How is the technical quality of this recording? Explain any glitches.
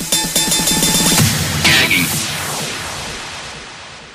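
No glitches or technical faults are audible anywhere in the recording.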